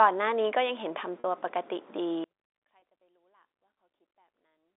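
At 1.20 to 1.24 s, packet loss with pitch repetition briefly holds the speech as a buzzy sustained tone while the last pitch period repeats across a 40 ms gap, consistent with two lost packets. From 2.24 s to the end, an audio dropout to a faint residue cuts the speech abruptly, leaving only a faint sound roughly 40 dB below normal level; the likely cause is the signal being lost while the downstream path stayed live. Within that residue, a second 20 ms concealment at 2.80 to 2.82 s briefly repeats a pitch period. The band-limited G.711 telephone sound is audible throughout.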